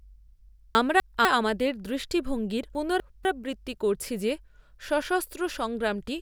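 At 0.75 to 1.25 s, and again at 2.75 to 3.25 s, the speech gets chunks out of order: a 250 ms piece turns up one chunk late, so two quarter-second slices swap places. Nothing's missing, but each spot sounds briefly jumbled.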